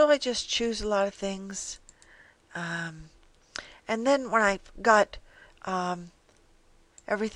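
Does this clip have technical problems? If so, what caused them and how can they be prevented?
Yes. A repeated buffer at about 1.51 s produces a brief click: a 10 ms block plays one extra time because fresh audio arrived late, with hard joins on either side and essentially nothing lost. A larger buffer or higher-priority audio thread would prevent it.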